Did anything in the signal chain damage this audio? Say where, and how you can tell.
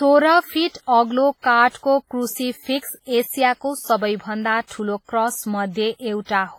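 Yes, at the codec stage, and for the whole clip. The speech sounds heavily washed, with a ringing smear around each syllable and a hiss that swells and fades with the speech instead of sitting at a steady level. That points to WMA compression as the likely cause: long transform blocks spread quantisation noise over tens of milliseconds, and weak spectral lines are dropped. The damage is consistent with a bitrate around 24 kbps. Since content still reaches about 21.4 kHz, this is coarse quantisation rather than a band-limited recording.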